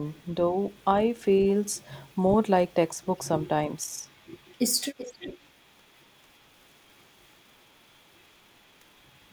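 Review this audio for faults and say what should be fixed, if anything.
From 3.86 to 4.05 s the speech dips by roughly 10 dB for about a fifth of a second, likely speech suppressed in double talk, as the echo canceller turned down the talker while the far side also spoke. Unlike a packet dropout, the sound dips but never goes fully silent. Better double-talk detection in the canceller would prevent it.

From 4.97 to 5.37 s an echo leak is heard: a delayed copy of the speech arrives 385 ms later, about 15 dB below it, likely loudspeaker pickup the far-end canceller failed to remove. Unlike room reverberation, it is a distinct repeat, not a smeared tail. Headsets or a better-converged canceller would prevent it.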